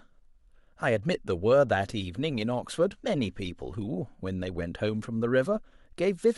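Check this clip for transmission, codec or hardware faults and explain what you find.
No transmission, codec or hardware faults.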